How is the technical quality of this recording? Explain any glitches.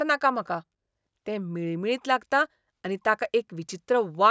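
No technical faults can be heard in this recording, and the signal stays steady and unbroken throughout.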